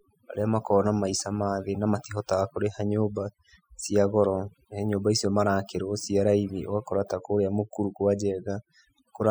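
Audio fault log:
Throughout, overdone noise removal: the background sits at near silence between phrases, dotted with brief twinkling specks where isolated frequency bands flicker back on. A noise reduction stage set too aggressively is pulling individual bands down hard whenever they come close to its noise estimate, and the quieter parts of the speech fall under that threshold and vanish with the noise. Plain low-bitrate coding differs: its swirl and smearing stay tied to the signal rather than leaving a sparkling, hollowed-out silence.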